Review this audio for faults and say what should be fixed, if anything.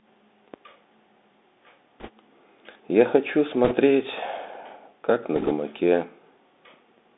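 The whole clip carries the Bluetooth CVSD headset codec. The speech sits in a narrow band, about 200 Hz to 3.6 kHz. Nothing higher survives. The damage is plainly audible. CVSD sends one bit per sample, saying only up or down, with an adapting step. The sound fits a 64 kbps CVSD link. Fast, loud high content outruns the step and smears. S sounds turn scratchy. A grainy hiss sits under the speech. To prevent it, use a wideband headset mode such as mSBC or LC3, or record on a wired microphone.

Bit errors on a Bluetooth voice link appear three times: 2.00 to 2.09 s, 3.65 to 3.75 s, and 5.36 to 5.52 s. The first two are slightly denser, at a few percent. The last is a little lighter and lasts longer. Each bit in CVSD carries the same small step, and mistakes fade out quickly. So there are no loud clicks. Instead, each burst adds a rushing, crackly noise over the speech. To prevent it, keep the headset close to the host and away from 2.4 GHz interference.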